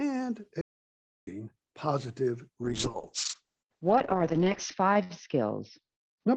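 At 0.61 s the speech drops into silence for about 0.66 s before resuming at 1.27 s, a playback stall, likely the player starving for data.

From 2.63 s to the end, the speech turns rough and muffled. This is a call bitrate drop: Opus fell from 32 to 7 kbps, and the bandwidth narrowed from 12 kHz to 8 kHz.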